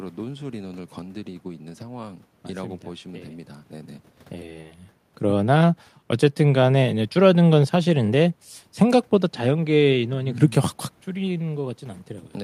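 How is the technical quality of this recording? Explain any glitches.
No technical faults are present.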